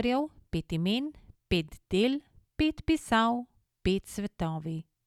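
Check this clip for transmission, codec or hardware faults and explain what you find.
No faults found in this clip.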